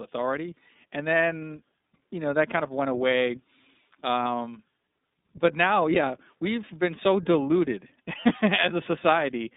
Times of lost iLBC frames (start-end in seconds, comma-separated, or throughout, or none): 4.23-4.26